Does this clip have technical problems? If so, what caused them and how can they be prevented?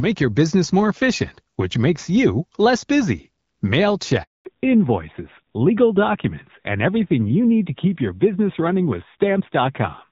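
Yes. A handover gap silences the speech from 4.23 to 4.45 s: the call switched networks, no frames arrived for 220 ms, and that speech is lost. Keeping handovers seamless, with make-before-break switching and jitter-buffer concealment, prevents this.

After the gap, at 4.45 s, the call falls back to narrowband. The wideband sound of the HD Voice codec before 4.23 s, consistent with about 12.65 kbit/s AMR-WB, gives way to audio with nothing above 4 kHz, duller and rougher, consistent with a low-rate AMR-NB mode. Ensuring both networks support AMR-WB end to end prevents this.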